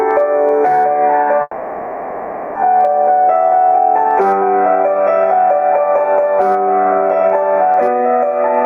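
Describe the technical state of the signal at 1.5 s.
At 1.5 s, likely a long network dropout (1.41 to 2.57 s): the receiver stretches the last sound into a fading buzz or hiss, then resumes with about 1.1 s skipped, not delayed.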